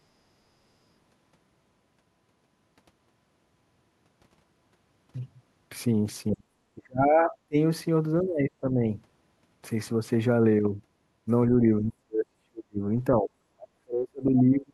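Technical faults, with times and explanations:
6.32–6.5 s, 6.75–7.56 s, 8.23–8.82 s, 11.49–11.63 s, 11.81–12.81 s and 13.12–14.73 s, speech suppressed in double talk: the speech sinks or drops out in chunks, by as much as about 40 dB, though only slightly at 11.49 s. This is likely an echo canceller that, with both sides talking at once, mistook this talker for loudspeaker echo and attenuated it.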